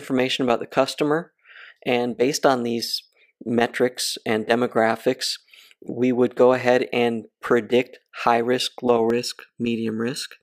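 From 9.10 s to the end, channel delay (comb filtering): one side lags by under a millisecond, cancelling near 700 Hz and above, heard as hollowness; spectrograms show evenly spaced dark notches.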